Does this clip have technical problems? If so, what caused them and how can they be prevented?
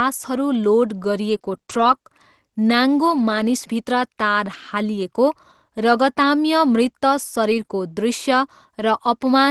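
Yes. Scattered short gaps between 1.29 and 4.55 s: about five brief holes in the speech, none longer than about 20 ms, were patched by extending the preceding sound, leaving small ticks and hiccups. These can be prevented with a steadier network path and a slightly deeper jitter buffer, so that late packets still arrive in time.

Lost packet rebuilt from error correction at 7.49 to 7.63 s and again at 7.69 s: each missing stretch was replaced by the low-bitrate Opus copy carried in the following packet, so there is no gap, but the speech turns rougher and noisier. Keeping Opus in-band forward error correction enabled with a loss-rate hint that matches the real network avoids actual gaps in these spots, and reducing the packet loss itself removes the roughness.

Short concealed packet loss from 7.65 to 7.69 s: about 20 ms never arrived and no backup copy existed, so the decoder continued the last sound and blended it back in, which produces a brief smear. 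Setting a higher expected packet-loss percentage gives the encoder more redundancy to cover more lost packets.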